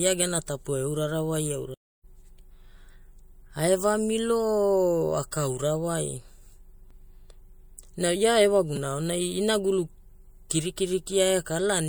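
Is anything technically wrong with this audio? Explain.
Yes, there are two kinds of fault in this speech clip.

A stream reconnect occurs from 1.74 to 2.05 s, right after "gena tapua eurarawai". The connection dropped, playback went quiet while the player reconnected, and a fresh decoder picked the stream up again mid-flow. The result is a gap of about 290 ms of silence, after which the speech resumes roughly a third of a second further on, so a short stretch of the utterance is simply skipped.

A repeated buffer is heard twice, at 6.89 s and at 8.76 s, the second just before "aonai inagulu". Each time new audio failed to arrive in time, so the output device replayed its last 5 ms block, three extra times at 6.89 s and two extra times at 8.76 s. Because the repeated piece is so short, each event sounds like a click or tiny buzz rather than an audible stutter, and a sliver of speech, around 10 to 15 ms, is lost.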